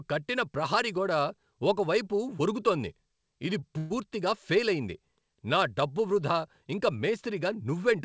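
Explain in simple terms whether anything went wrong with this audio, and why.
Two problems occur close together in this speech. From 3.60 to 3.65 s, just after "వరుగుతోంది ఇది", a sound is briefly held too long. This is a short stall from a late packet: the call stretched the last sound for a moment, and nothing was lost.

From 3.78 to 3.93 s, a longer buzz or hiss fades out before the speech resumes at "ఫేలయింది నా డబ్బు వృధా". This call audio freeze was likely caused by delayed packets. It differs from the stall because it lasts longer and fades rather than just holding.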